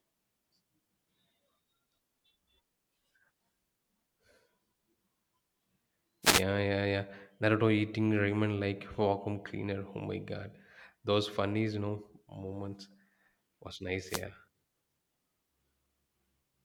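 At 6.22 to 6.44 s, just before "yeah yeah naruto eating", and again at 14.06 to 14.24 s, a wireless microphone noise hit occurs: the FM radio link fades as reflections cancel, receiver noise surges, and a brief static swish is heard.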